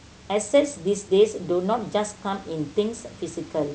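Nothing in this speech recording sounds faulty.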